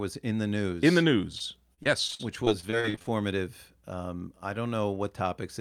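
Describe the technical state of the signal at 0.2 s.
At 0.2 s the signal is intact, with no audible fault at that moment.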